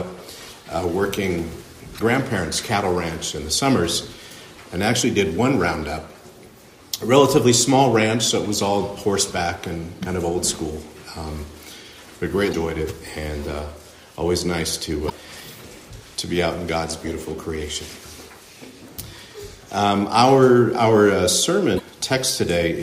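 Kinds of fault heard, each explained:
Damaged data in a compressed stream: misread frames knock the decoder out of sync, giving four 50 ms glitches, seen as sudden broadband smears with waveform breaks.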